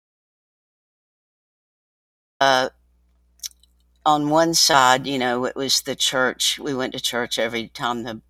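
From the first instant to 2.41 s the file holds silence, an audio dropout to silence already under way when the clip begins, likely from a lost input while writing continued. The waveform is flat and the spectrogram completely blank, with no room tone, until sound starts abruptly.

Between 4.71 and 4.75 s there is a short concealed packet loss: about 20 ms of audio never arrived, and the decoder covered roughly 18 ms by extending the preceding sound before blending back. It is heard as a brief smear or wobble, showing on the spectrogram as a thin, slightly blurred vertical seam.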